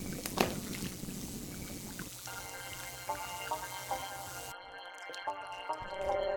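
From start to finish the audio carries overlap-add ripple: frames were rejoined with windows that fail to sum evenly, so level dips by about 11 dB around 200 times a second. It sounds like a metallic buzz; the waveform shows a regular scalloped envelope, the spectrogram vertical striping.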